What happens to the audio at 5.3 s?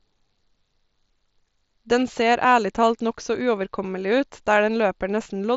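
Concealed Bluetooth headset packet loss occurs at about 5.24 s. About 15 ms of audio, which fits a couple of lost headset packets, never reached the phone, so the receiver patched the gap with the best-matching stretch of the preceding waveform. The repair is brief, a buzzy tone held at full level with a small warble where real audio returns.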